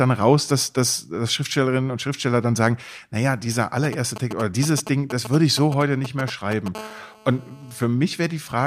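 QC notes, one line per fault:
3.84–6.68 s, GSM signalling bursts: just after "dann sagen naja dieser", a galloping dit-dit-dit of brief 217 Hz buzz fragments, around 10 dB below the speech. A nearby 2G phone is exchanging short groups of signalling bursts, and the audio circuitry rectifies each radio pulse into sound.
6.75–7.86 s, GSM phone buzz: a continuous hard, raspy 217 Hz buzz rich in harmonics, about 20 dB below the speech and unrelated to it. The phone is now transmitting steadily as in a call, bursting 217 times a second, so the rectified pulses form an unbroken tone.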